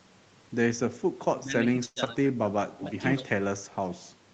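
At 1.39 to 1.54 s the speech dips by about 15 dB, and again from 1.71 to 2.84 s for around half a second in total. This is speech suppressed in double talk, likely from an echo canceller ducking the near talker while the far side spoke. On a waveform the envelope sags. A spectrogram shows the upper harmonics thinning in patches.

From 1.85 to 1.98 s comes a call audio freeze. About 110 ms of stretched, fading buzz stands in for late packets, ending in roughly 20 ms of near silence. The sound then resumes where it stopped, with nothing lost, most likely because the jitter buffer ran dry. A spectrogram shows smeared, blurred horizontal bands followed by a brief dark gap.

At 2.04 to 2.07 s there is short concealed packet loss. About 40 ms of audio is missing and only a tiny filler bridges the gap, so the sound skips forward. The waveform shows an abrupt splice, and the spectrogram a thin vertical seam.

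From 2.83 to 3.23 s an echo leak follows. A copy of the speech returns 110 ms late and about 15 dB down. It is likely residual loudspeaker echo that the far-end canceller missed. The spectrogram shows faint, shifted duplicates of the harmonic patterns, with nothing above 8 kHz on either path.

A final suppression in double talk runs from 3.21 to 3.30 s. It is shallower, about 10 dB, and is seen as a short notch in the waveform envelope.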